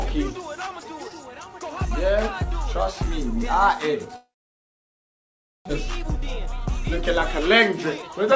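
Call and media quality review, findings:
Long network dropout, likely cause, 4.16 to 5.71 s: the audio smears into a fading buzz, then goes quiet for most of the gap. About a second of content never comes back, and the stream resumes later with the jump. Delay shifted by roughly half a second.

Jitter buffer speed-up, 5.80 to 7.22 s and 7.99 to 8.34 s: the buffer drains the backlog by snipping out pitch-period chunks. The first pass is a gentle 103% and trims about 40 ms. The second is a rushed 139%, dropping around 150 ms at the same pitch. On the G.722 path, nothing comes through above 8 kHz.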